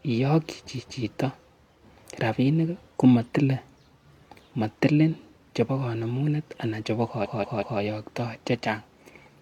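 Repeated frames show up twice in this speech. From 0.75 to 0.98 s a chunk of about 232 ms plays one extra time, a quick stutter, which fits a run of roughly five compressed frames being sent twice. At 7.20 to 7.76 s a shorter 186 ms block loops three extra times, so it sounds like a skipping record and stretches the audio by about 0.56 s.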